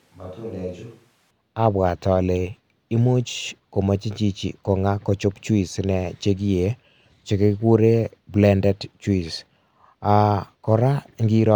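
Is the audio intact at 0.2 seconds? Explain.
No. From the start until 1.30 s the voice is roomy, hollow and thin, about 10 dB quieter, with room noise around 30 dB below it. This is a switch to a distant microphone, likely because the close microphone dropped out. Unlike added reverb or a bass cut, the level, tone and noise all snap back together at 1.30 s.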